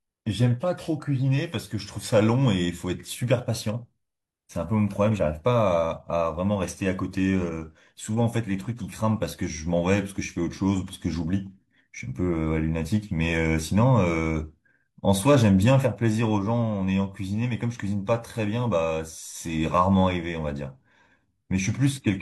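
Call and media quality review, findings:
No findings in this call and media quality review.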